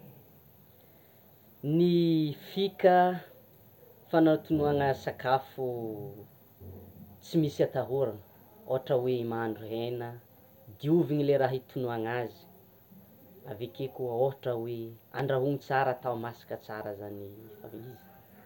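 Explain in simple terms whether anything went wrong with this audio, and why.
One loud pop hits at 15.19–15.22 s, a sharp click over the speech. It's likely a voltage spike from a plug, switch, static or driver glitch.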